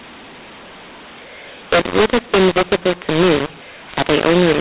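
A mu-law and A-law mix-up runs through the whole of this speech clip: the telephone audio was coded with G.711 A-law but decoded as mu-law. Because the two logarithmic curves assign levels differently, every sample lands at the wrong amplitude, some too loud and some too soft. The speech comes out harsh and gritty, the quietest samples are pushed well above silence, and the gaps between phrases fill with hiss, all inside the 4 kHz telephone band.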